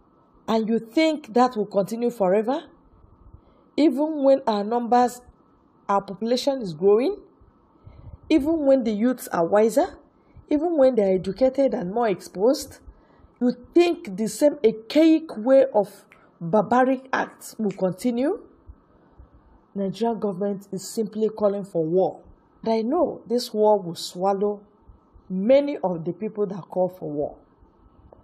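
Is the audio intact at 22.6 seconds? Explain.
No. At 22.63 s the sound jumps forward abruptly with a brief blip, and what follows doesn't continue from what came before. This points to a stream segment skipped: a chunk of the segmented stream likely failed to arrive, so the player moved on to the next one and that stretch of programme is simply gone. Unlike a dropout, there is no pause of silence or a held sound filling the gap. The material is missing, and playback resumes further along.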